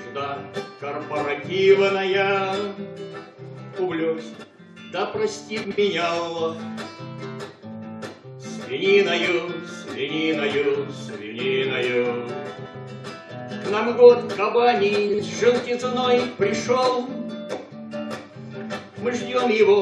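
Frames out of order: neighbouring frame blocks were decoded swapped at 4.34–4.44, 5.64–5.79, 12.56–12.75 and 15.09–15.19 s, so each stretch plays halves exchanged, a garbled flutter.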